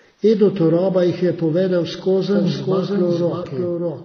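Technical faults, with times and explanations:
Throughout: transcoding between lossy codecs. Nothing is heard above 6.2 kHz, and smeared, swirly artefacts sit on top of duller coding grain. This likely comes from a low-rate AAC encode re-encoded as HE-AAC. The later codec spends bits copying earlier damage and adds its own.
2.35 s to the end: doubled audio track. Just after "jih je povedel", a second full-band copy of the speech enters abruptly, trailing about 0.7 s behind and roughly 5 dB quieter. It has no decay or room colour, so it is likely a second capture path mixed in, not a real echo.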